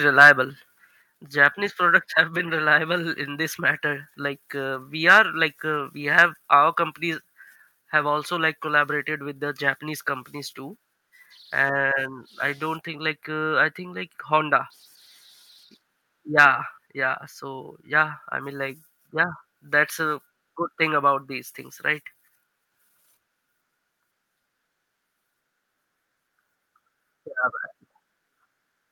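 Microphone overload first appears from 0.19 to 0.30 s, where peaks run about 4 dB past the converter's ceiling and are likely flattened. A small share of samples is cut, giving a harsh crackle on the loudest moments. At 1.02 s the microphone volume is stepped down by about 5 dB, likely the software reacting to that clipping. Voice and background fall together in one clean drop, with no added distortion, unlike the crackle of overload. The same overload crackle, with peaks about 3 dB over, likely returns from 5.09 to 5.19 s, between "uh we" and "like uh we", and again from 6.18 to 6.22 s, right after "like uh we". At 7.14 s a second, smaller step down of about 2 dB likely follows them. One more brief overload, likely clipping a small fraction of samples at about 3 dB over, occurs from 16.39 to 16.45 s.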